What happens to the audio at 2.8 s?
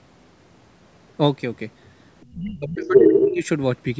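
At 2.8 s the speech is sinking in level. Between 2.35 and 3.44 s it falls by up to about 30 dB, roughly a second in total. This is likely speech suppressed in double talk: the echo canceller, unable to separate the talker from loudspeaker echo, attenuated both.

From 2.85 to 3.36 s a second voice comes through, a few dB louder than the suppressed talker. This is likely the other side's voice leaking through, meaning loudspeaker playback left in the microphone by incomplete cancellation. It is a separate talker's sound, not a repeated copy of the talker's own speech as with a delay-style echo.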